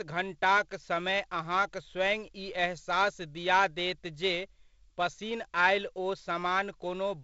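Nothing in this speech clip stood out as a technical problem on listening.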